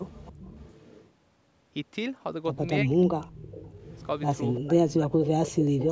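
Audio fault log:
0.06–1.1 s, 3.02–3.06 s, 3.42–4.07 s, 4.54–4.6 s, 5.24–5.28 s, 5.45–5.91 s: echo leak. A delayed copy of the speech trails the original by 340 ms. It starts at about 25 dB below the speech and reaches about 10 dB below near the end. It likely comes from a far-end loudspeaker whose echo canceller let residual pickup through.
2.84–3.36 s, 4.66–5.26 s: speech suppressed in double talk. The talker's level drops in pieces while the other side is active, falling by roughly 35 to 40 dB over about half a second each time. The likely cause is the echo canceller clamping both voices when it could not tell the talker from the echo.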